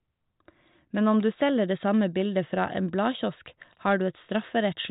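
No faults heard; the speech sits on a G.726 ADPCM path at 40 kbit/s with the band stopping near 3.8 kHz and no more than a faint trace of quantisation hiss.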